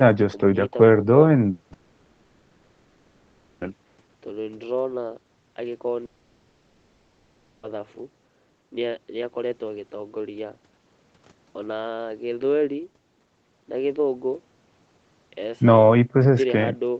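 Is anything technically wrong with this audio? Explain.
Yes. From 1.73 to 3.63 s, and again from 6.05 to 7.65 s, the speech gives way to a fading buzzy, hissy continuation of the last sound. Speech returns with that stretch gone. This is likely a long network dropout. The receiver had nothing to play for about 1.9 s and then 1.6 s, so it stretched the final audio it held, and every lost moment was covered that way rather than left silent. The rest of the clip is band-limited to 8 kHz, which fits Opus at around 24 kbps on a call path.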